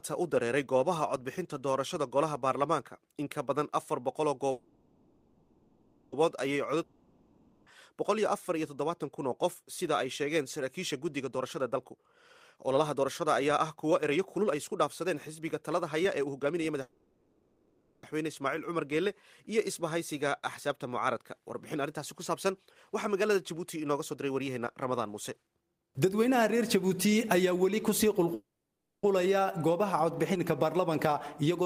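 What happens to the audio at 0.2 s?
Nothing goes wrong at 0.2 s; the audio plays through that moment intact, with no dropout, click or distortion.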